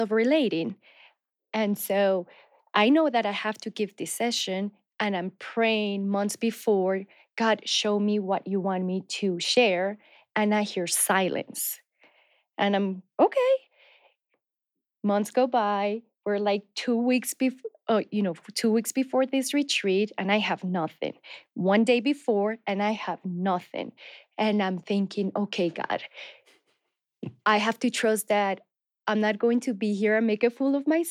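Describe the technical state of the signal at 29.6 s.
Around 29.6 s the signal is intact, with no audible technical fault at that point in the speech.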